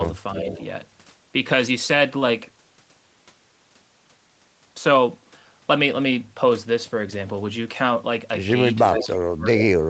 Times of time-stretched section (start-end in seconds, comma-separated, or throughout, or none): none